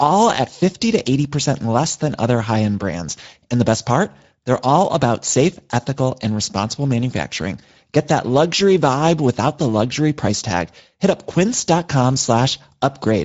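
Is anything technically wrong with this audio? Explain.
Yes. Throughout, the speech has passed through the Speex codec at a setting whose damage points to a mid-range bitrate near 17 kbps. Too few bits for the CELP excitation leave the speech plainly hoarse and noisy, the upper band is only shaped noise, and nothing reaches above 7.7 kHz.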